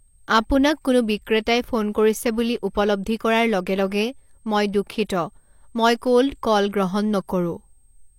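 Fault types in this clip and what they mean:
USB whine: a thin, fixed-pitch tone sits under the speech for the whole clip, centred on 8 kHz and at roughly 45 dB below the speech. It comes from the USB bus drawing current in 125-microsecond microframes, and that ripple gets into the audio through the shared power or ground. On a spectrogram it shows as a narrow, unbroken horizontal line at 8 kHz running from start to finish. In the waveform it is too small to see beside the speech.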